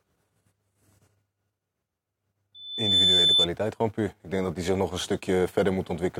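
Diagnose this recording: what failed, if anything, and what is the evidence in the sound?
Loudspeaker feedback squeal in the analogue acoustic loop: the microphone's own loudspeaker pushed the loop gain above one at 3.5 kHz, a tone swelling over the speech from 2.54 to 3.47 s, before "gewoon puur".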